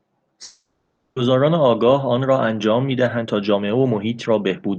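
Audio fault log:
0.43–1.18 s, long network dropout: The speech gives way to a buzzy, smeared continuation of the last sound that fades over about 0.73 s without ever reaching full silence, then resumes with about 0.4 s of speech gone. This is likely a long network dropout. The receiver had nothing to play and stretched the final sound to cover the gap. When audio returned, playback had fallen about a third of a second behind.
2.88–4.78 s, jitter buffer speed-up: From here to the end, the speech runs noticeably hurried, at about 115% of normal speed, while the pitch stays unchanged. The jitter buffer was holding more audio than it aims for, as happens when delayed packets arrive together. To catch up, the receiver repeatedly cut out tiny pitch-period slices, removing roughly 0.3 s in total. This shortens the timing without shifting the pitch.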